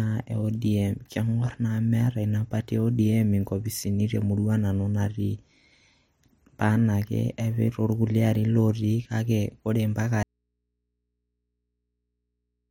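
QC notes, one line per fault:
10.23 s to end, audio dropout to a faint residue: the speech stops abruptly in mid-flow and never returns, leaving only a low mains hum sitting roughly 55 dB below the speech level. The hum shows the path after the break stayed live, so the likely cause is the source feed being lost upstream while the input remained open. A natural pause would keep room tone continuous, and a fade would taper gradually; here the level drops instantly to the hum.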